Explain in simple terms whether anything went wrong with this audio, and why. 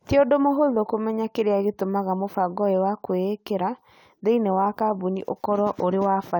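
Nothing went wrong with this recording of speech: the signal is technically sound throughout, with no faults to report.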